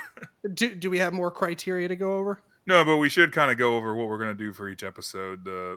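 Nothing technically wrong turns up in this speech recording; there's no glitch or defect anywhere in it to point to.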